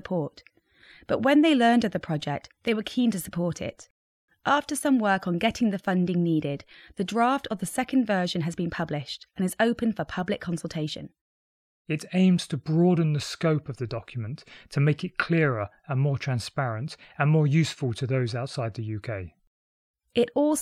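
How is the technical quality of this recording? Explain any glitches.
No glitches or technical faults can be heard anywhere.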